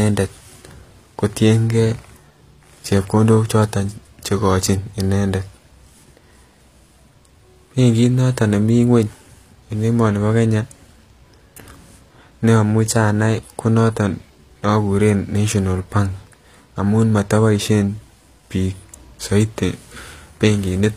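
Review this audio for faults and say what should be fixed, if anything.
Throughout, the treble sounds synthetic, and s sounds turn gritty and lispy. Nothing reaches above 14.9 kHz. This is likely HE-AAC compression, rebuilding upper bands from copied lower ones, consistent with roughly 24 kbps. Encode at a higher bitrate, or use plain AAC, to prevent it.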